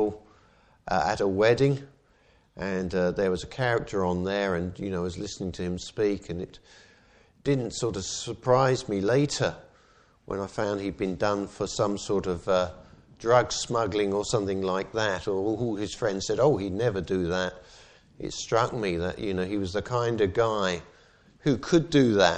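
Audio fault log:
No faults detected in this audio.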